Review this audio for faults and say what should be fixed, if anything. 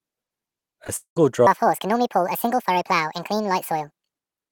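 Short concealed packet loss occurs at 0.84 s and again at 0.87 s. Each time about 10 ms of speech never arrived, and the decoder bridged the gap by extending the preceding sound. It is heard as a quick smear or wobble. On a spectrogram, each shows as a sliver where harmonics blur and stretch flat before real detail resumes.

A long network dropout likely explains the break from 0.96 to 1.17 s, where about 200 ms of audio is gone. The last sound carries on as a fading buzz or hiss, followed by roughly 100 ms of silence. On the waveform this is a decaying tail, then a flat line, then an abrupt restart.

A section at the wrong speed runs from 1.47 s to the end. It plays 1.66 times too fast, pushing pitch up by nearly ten semitones and making speech hurried and chipmunk-like, likely from resampling against the wrong clock. On a spectrogram, harmonic spacing widens and syllables compress.

To prevent these faults, use a larger jitter buffer with retransmission or redundancy on the network path, and make sure the playback or editing stage uses the clip's true sample rate.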